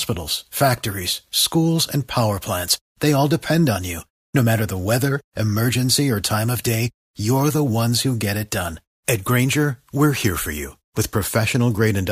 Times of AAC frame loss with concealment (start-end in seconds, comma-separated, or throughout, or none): none